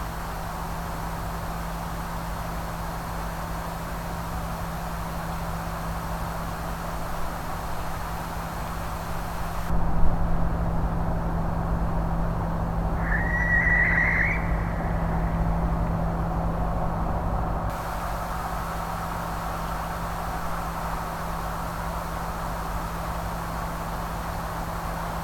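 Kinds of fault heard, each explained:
De-emphasis applied wrongly: a treble-cut stage meant to reverse pre-emphasis acts on audio that never received it, or acts twice, so the response rolls off smoothly toward the top. From 9.7 to 17.7 s the sound turns dull and muffled, down about 11 dB at 10 kHz relative to 1 kHz.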